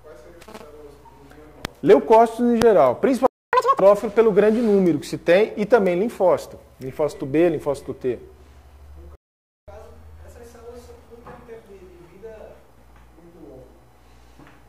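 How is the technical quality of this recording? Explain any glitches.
The recording has two interruptions in playback, each followed by a rush to regain lost time.

Playback stalls occur from 3.27 to 3.53 s (about 265 ms) and from 9.15 to 9.68 s (about 524 ms). The player was likely starved of data or had its thread blocked, so nothing reached the output. The sound cuts out mid-flow into dead silence, then resumes.

Catch-up at higher speed follows each stall. The player resamples its backlog to play it faster and win back lost time. From 3.53 to 3.80 s it runs at 2.0 times speed, so the sound briefly turns chipmunk-like, roughly ten semitones high. From 9.68 to 12.68 s the rate is 1.1 times. That gives a gentler, longer lift of a semitone or two and a slight hurry, before speed and pitch settle back to normal.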